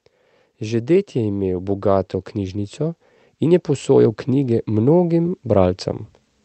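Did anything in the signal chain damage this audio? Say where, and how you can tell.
Yes. Automatic gain rising in call processing lifts speech and background together by about 9 dB from 0.61 to 5.86 s, so the waveform envelope widens steadily.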